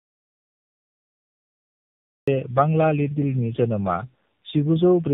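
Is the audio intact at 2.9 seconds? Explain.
No. At 2.9 seconds, as everywhere in this speech, the voice sounds rough, muffled and warbly, with nothing above about 3.8 kHz. This is tandem speech coding: the sound points to two low-rate narrowband speech coders in a row, such as AMR-NB at around 7 to 8 kbit/s, with a 64 kbit/s mu-law link between them. The second coder re-encodes the first one's already degraded output, so their errors pile up.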